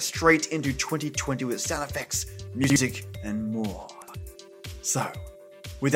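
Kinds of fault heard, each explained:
Chunks out of order: brief jumbled stutters at 2.64 to 2.76 s and 4.02 to 4.14 s. Each time, a 60 ms slice of audio arrives one chunk late and plays after the slice that should follow it. Nothing is lost, but the order is wrong and there are three hard joins.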